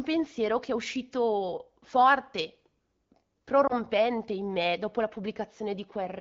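At 3.68 to 3.74 s, just before "in me dopo la", lost AMR speech frames cause a brief dip. It points to one missing 20 ms frame concealed within the light wideband coding.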